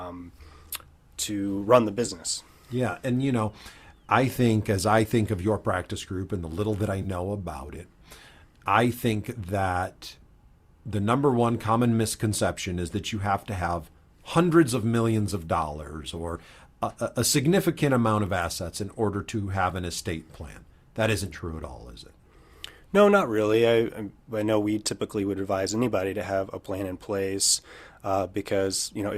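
The AAC stream drops short runs of frames twice, at 2.06 to 2.11 s just after "to run the", and at 7.02 to 7.07 s after "the little that I" and before "about it". Each gap covers about 30 ms, which fits roughly three lost frames. This is AAC frame loss with concealment: the decoder patches each hole from the last good spectrum, so the sound briefly smears into a noisy, phasey blur before clean decoding resumes. Underneath, a light graininess is likely from the low-delay AAC compression.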